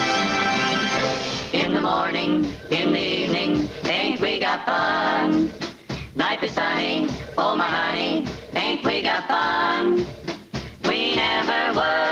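Gain pumping runs through the whole clip. The gain is pushed down under each loud sound, a swing of around 10 dB, and loud and soft passages sit squashed close together. The likely cause is input gain set far too high, with a fast limiter clamping down on each peak. Unlike a noise gate, which cuts the gaps to silence, here the gain itself rides up and down.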